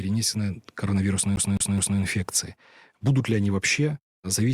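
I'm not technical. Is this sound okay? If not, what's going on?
No. From about 1.36 to 1.99 seconds the speech gets stuck: the same short slice, about 0.21 seconds long, plays three times in a row with a tiny gap of silence at each jump. This is a CD stuck on one turn, where a scratch knocks the laser back to the same spot on every spin. The even, quick stutter of identical pieces is what sets it apart from an echo, which fades as it repeats.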